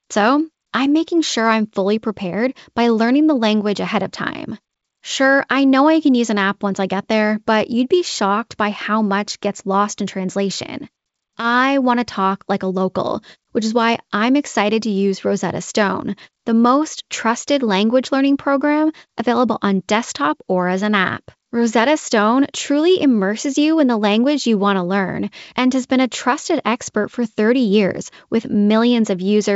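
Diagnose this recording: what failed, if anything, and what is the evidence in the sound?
Nothing here failed, as far as I can hear: the speech comes through the G.722 wideband telephone coding path at what sounds like its full 64 kbit/s rate, and the band simply stops around 7.7 kHz, which is what that wideband telephone path normally does.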